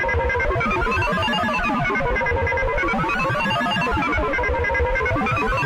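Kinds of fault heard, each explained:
Nothing stood out as a problem on listening to this sound.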